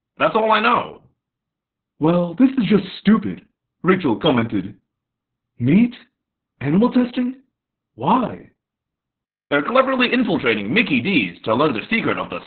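Opus voice compression runs through the whole speech clip. The SILK coder works in narrowband, leaving nothing above 4.5 kHz, and its coarse excitation coding makes the speech muffled, hoarse and slightly robotic. The heavy damage points to a bitrate near 6 kbps.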